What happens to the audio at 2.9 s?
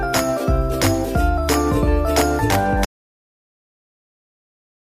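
An audio dropout to silence begins at 2.85 s and runs to the end of the clip. The sound cuts off abruptly into silence with no room tone left, most likely because the input was lost while the recorder kept writing silence.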